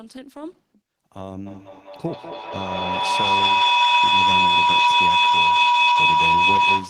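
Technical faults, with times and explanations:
1.46 s to the end of the clip, feedback howl. A tone near 1 kHz rises out of the speech and keeps growing. At its peak it sits about 13 dB above the speech. It pulses roughly every fifth of a second. That pulse is the delay of a loop between a microphone and a loudspeaker. Each trip round the loop adds level, so the sound builds instead of dying away. Only the frequency the loop favours survives, which gives the narrow, ringing pitch. Nothing breaks the loop before the clip ends.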